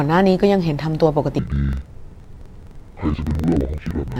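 Interleaved audio read as planar from 1.39 s to the end: alternating left-right samples split into halves per 43 ms block, so the speech drops an octave, doubled and choppy at 23.4 Hz.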